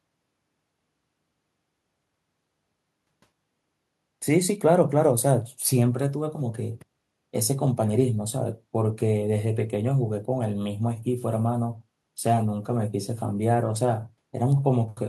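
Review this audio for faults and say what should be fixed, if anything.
Nothing here needs fixing; I listened through and couldn't pick out any technical fault anywhere in the recording.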